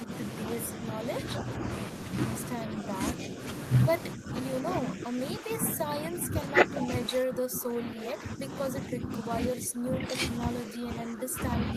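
The speech dips by about 10 dB at 0.03–0.1 s, briefly and more lightly at 2.64–2.88 s, then again from 4.15 s to the end, likely speech suppressed in double talk by an echo canceller.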